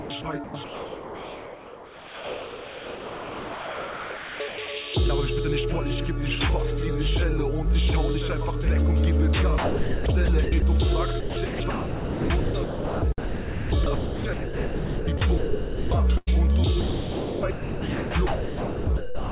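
From 0.00 to 4.68 s the sound is repeatedly cut and replaced by a flat synthetic hiss, about 4.1 s of the stretch in total. This is likely sound chopped by the voice detector: the sender's detector kept deciding the input was silence, stopped transmitting, and the receiver generated comfort noise in its place. Onsets and tails drop out. The same happens from 9.58 to 10.62 s (about 0.6 s replaced) and from 11.20 to 15.91 s (about 3.6 s replaced).

At 16.17 to 16.29 s a burst of packet loss removes about 100 ms. The receiver stretches the last received sound across the gap for roughly 94 ms and fades it down, so a short held tone or hiss is heard. The audio then picks up further along, with that portion missing.

From 16.81 to 19.31 s the voice-detector chopping returns, with about 2.2 s swapped for comfort noise. Throughout, the audio carries nothing above 4 kHz, which fits a narrowband G.711-type call codec.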